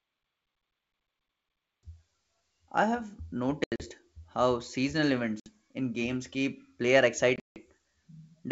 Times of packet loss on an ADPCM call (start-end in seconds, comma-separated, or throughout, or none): 3.64-3.84, 5.40-5.49, 7.36-7.58